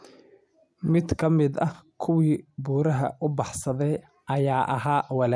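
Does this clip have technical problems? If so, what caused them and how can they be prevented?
No, the speech signal in this clip shows no audible technical problems, so there is nothing here to trace to a cause or to prevent.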